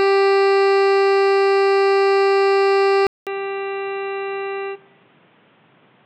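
Music that, after a 200 ms gap at 3.07 s, turns dull and boxy with nothing above 4 kHz, drops about 10 dB and gains fresh noise around 30 dB down. The gap plus the new noise and level, which a simple filter would not bring, point to a likely input switched to a poorer device.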